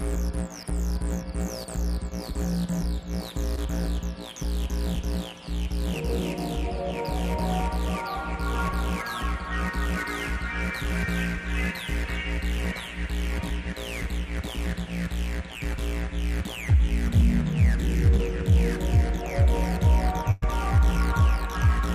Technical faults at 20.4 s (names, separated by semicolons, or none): burst of packet loss